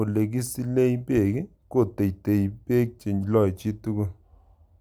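Speech, with no audible faults.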